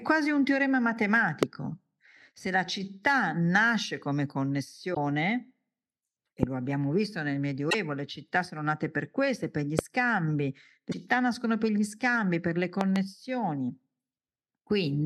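Speech, and it's got two separate problems. First, loud pops sit on top of the talking at 1.43, 6.43 and 9.79 s, with a double pop from 12.81 to 12.98 s, standing out by roughly 25, 20, 20 and 15 dB, while the speech carries on underneath. They're likely a voltage step or spike getting into the chain, say from a plug, switch, static or driver glitch. Second, damaged data in the compressed stream breaks up the sound for about 50 to 75 ms at 4.91, 7.67 and 10.89 s, where the decoder hit corrupted frames, lost sync and had to hunt for the next valid frame header.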